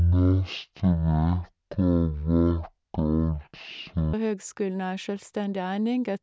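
From 0 to 4.13 s, before "høgskulen ei", a wrong sample rate slows the speech to 0.36 speed and drops pitch 17.6 semitones, fitting 44.1 kHz audio played at 16 kHz.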